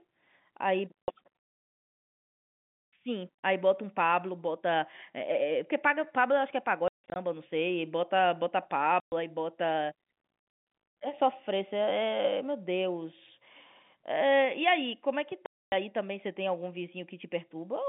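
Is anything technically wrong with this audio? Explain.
Yes. There is packet loss filled with silence at 1.04 to 1.08 s, 6.88 to 7.16 s (scattered gaps, longest about 160 ms), 9.0 to 9.12 s and 15.46 to 15.72 s. Lost packets were replaced with zeros, so the speech drops out abruptly, and gap lengths fit 20 ms packets. The waveform shows flat-line holes. The spectrogram shows blank vertical strips with broadband edges. The telephone-band coding behind it is heard as a line band of roughly 150 Hz to 3.6 kHz.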